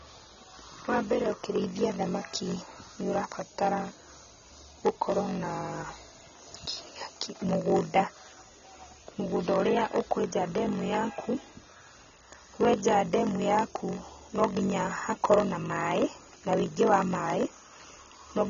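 From start to finish, a block size mismatch (padded) means one stage writes blocks shorter than the next stage reads, which fits a 1,024-sample read. Zeros fill each shortfall, leaving a 46.9 Hz buzz and speech slowed to 0.938 times speed at near-normal pitch.

Also throughout, the speech sounds dull and smeared, with nothing above 6.9 kHz and a plainly audible warbling, fizzy texture on sustained sounds and sibilants. The likely cause is AAC compression, AAC-LC at a low bitrate, cutting the top band and leaving spectral holes.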